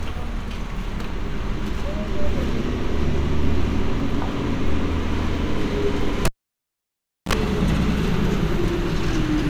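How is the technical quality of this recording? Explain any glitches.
The recording has one clear glitch, a cable pulled and plugged in, running from 6.25 to 7.33 s. A live lead is yanked out, causing a pop, then roughly 1.03 s of near silence. A 44 ms burst of 60 Hz mains buzz follows as only the plug tip makes contact, then a second pop when the sound returns. On a waveform this shows as two sharp spikes around a flat gap. A spectrogram shows vertical broadband lines at each pop and a brief horizontal band at 60 Hz and its harmonics.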